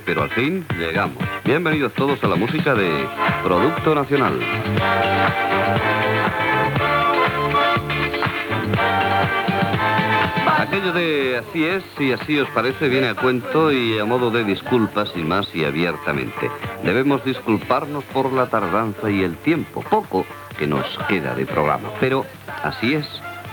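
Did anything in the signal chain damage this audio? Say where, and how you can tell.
No, nothing damaged it.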